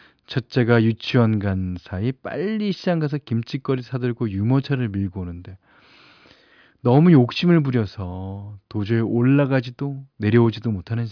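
No technical faults can be heard anywhere in the speech. There is nothing at any point in the recording that needs a time stamp or an explanation.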